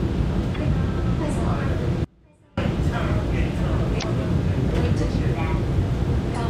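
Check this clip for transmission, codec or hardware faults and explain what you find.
Two kinds of fault are audible: three short bursts of corrupted compressed data and one dropout.

Damaged data in a compressed stream appears at 0.51 to 0.57 s, 3.99 to 4.04 s and 6.31 to 6.37 s. Bad bytes in the encoded stream make the decoder misread frames and hunt for the next valid header, so each spot gives a brief chirp or blip lasting roughly 56 ms.

Audio dropout to a faint residue runs from 2.05 to 2.57 s, about 0.53 s. The sound cuts off abruptly and only a faint trace remains, about 30 dB below the normal level, before it returns just as suddenly. That pattern suggests the signal feed was likely lost while the path after the break stayed live.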